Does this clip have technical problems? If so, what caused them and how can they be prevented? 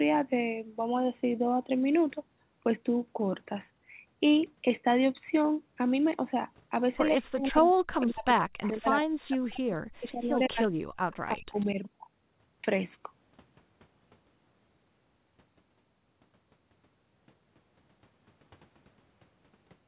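Yes, two related problems cluster between about 7 and 12 seconds.

Speech suppressed in double talk: from 7.16 to 10.16 s, then 10.48 to 10.75 s and 11.29 to 11.76 s, the talker dips by up to roughly 40 dB or drops out in pieces. The likely cause is an echo canceller that hit both sides talking at once, couldn't separate the near talker from the loudspeaker echo, and ducked everything. Better double-talk detection, or a headset on the far end, would prevent it.

Echo leak: scraps and one longer stretch of a copy of the voice, delayed by 140 ms, come through at 8.01–8.06 s, 8.62–8.68 s, 10.17–10.68 s, 11.12–11.16 s and 11.55–11.66 s. They sit about 20 to 30 dB below the main speech. The likely cause is a loudspeaker's pickup that the echo canceller didn't fully remove, so it was sent back down the line. A headset, lower speaker volume or a better-tuned canceller would stop it.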